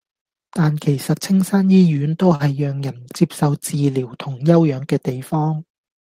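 At 2.35 to 2.57 s the speech has a short stall from a late packet: the jitter buffer ran dry and about 42 ms of the last sound was stretched, so nothing is lost, just a held syllable with a slight buzz or dip, seen as smeared, flat harmonics on a spectrogram.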